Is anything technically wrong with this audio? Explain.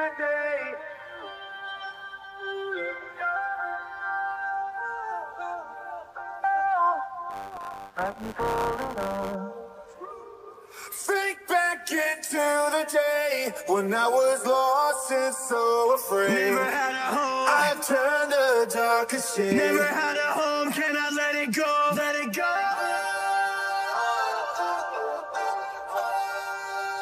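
Yes. From 7.29 to 9.36 s there is buffer tearing. The writer and reader of a ring buffer have slipped, so roughly a tenth of each 10 ms period replays audio from about 20 ms earlier between hard joins. The result is a robotic 100 Hz buzz. On a waveform this appears as steps every 10 ms, and on a spectrogram as vertical striping with 100 Hz-spaced harmonics.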